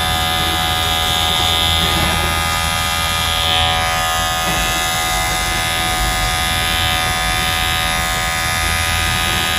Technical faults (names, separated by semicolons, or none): none